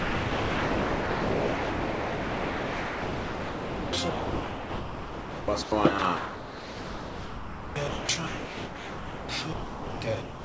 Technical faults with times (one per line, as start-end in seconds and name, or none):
0.00-5.72 sound chopped by the voice detector
5.99-10.44 sound chopped by the voice detector